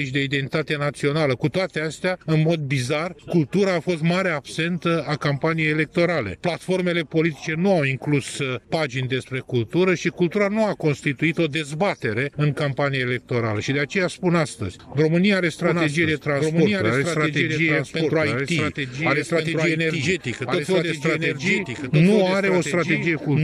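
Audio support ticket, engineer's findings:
Doubled audio track from 15.64 s to end. Full-band copy trails by about 1.5 s, a few dB below original, no decay or room colour, abrupt onset. Likely cause: second capture via slower path or misaligned edit layering two copies.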